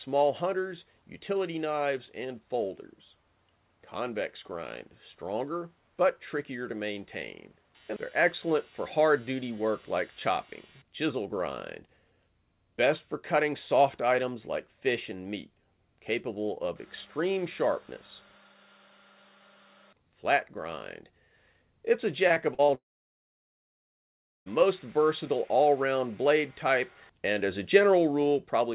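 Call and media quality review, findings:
Repeated packet loss (robotic sound), 22.28 to 22.70 s: choppy stretch with pieces missing. Four short holes, longest 45 ms, about 120 ms lost in total, with roughly 29% of the span concealed. Probable component is the network or jitter buffer: packets lost or late in quick succession, each hole patched by extending the last sound before the next one hits. Band-limited throughout, nothing above 4 kHz, which fits G.711 at 64 kbps.

Long network dropout, 22.74 to 24.62 s: the sound stops and is replaced by a continuation of the last sound that decays into silence, then audio resumes further on. About 1.7 s is missing. Likely cause is a network outage: nothing arrived, and concealment stretched the final frame until it faded out, with about 1.65 s of that time silent.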